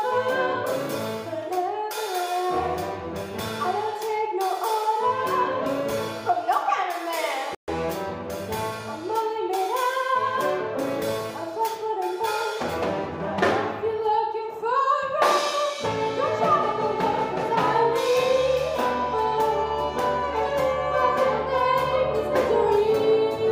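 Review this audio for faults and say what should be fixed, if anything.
There is a playback stall at 7.55 s: the sound cuts to silence mid-flow and resumes at 7.68 s, a gap of about 130 ms. The output simply stops rather than fading, and picks up again after the pause. The likely cause is the player running short of buffered data or its audio thread being blocked, so nothing reached the output until it caught up. To prevent it, give the playback path a deeper buffer and keep blocking work off the audio thread.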